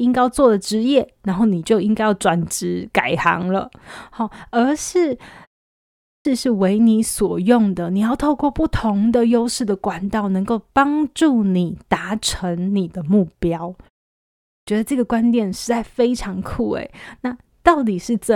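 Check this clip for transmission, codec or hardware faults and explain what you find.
There's one fault here, clipped start after a pause, showing up twice. At 5.8 s and 14.27 s, the output device wakes late after short pauses, swallowing about 450 and 400 ms, so speech starts abruptly.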